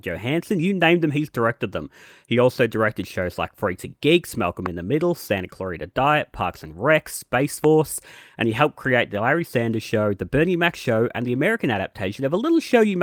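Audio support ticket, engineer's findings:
Loud pop, 4.66–4.68 s just before "in the", and 7.64–7.66 s: single sharp pulses, first roughly 15 dB over the speech, second softer. Likely a voltage transient from a connector, switch or static discharge. Speech runs on underneath, with no gap or dropout.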